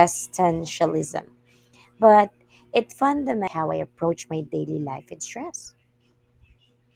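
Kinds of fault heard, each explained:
Channel delay (comb filtering): From 1.15 to 2.15 s one channel trails the other by roughly a single sample before the two are summed to mono. The first notch falls near 20 kHz, so this shows only as a dulling of the very top, not the hollow, phasey colour of longer delays.
Skip ahead: At 3.47 s playback jumps forward with no gap. Roughly a second of speech is simply gone, and the two sides are butted together. Unlike a dropout, there is no silence or filler, only an abrupt discontinuity where content is missing.
Jitter buffer speed-up: From 3.57 to 6.83 s the speech runs at 117% speed while pitch stays unchanged, because short pitch-period pieces are cut out repeatedly, about half a second in total. Unlike a skip ahead, the loss is spread thinly, so the speech sounds hurried rather than broken.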